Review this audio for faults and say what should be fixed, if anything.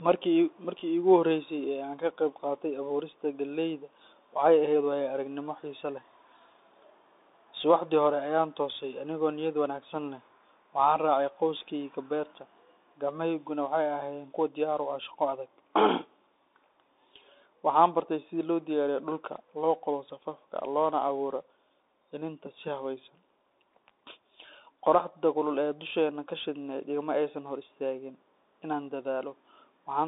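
Throughout, the speech sounds thin and boxed in, with a granular hiss underneath and scratchy s sounds. This is the Bluetooth CVSD headset codec. It codes each sample as one up-or-down bit with an adapting step, which fits a 64 kbps link, so loud high energy outruns the step. The line is held to about 250 Hz–3.7 kHz, with nothing above 3.8 kHz. Record through a wired microphone or a wideband Bluetooth mode instead of the headset's hands-free profile.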